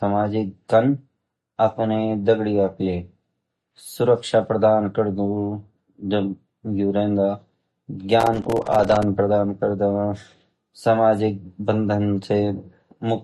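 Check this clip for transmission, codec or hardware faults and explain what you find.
Two faults are audible in this speech clip.

Throughout, the speech sounds watery and swirly, with nothing above 13.1 kHz, which points to a low bitrate, likely MP3 compression. A spectrogram shows a hard ceiling and flickering high bins.

From 8.20 to 9.03 s, processor overload crackle tears through the sound. Dozens of short buffers, around 3 ms each, miss their deadlines and drop to silence, leaving hard-edged gaps in the waveform and vertical stripes on a spectrogram.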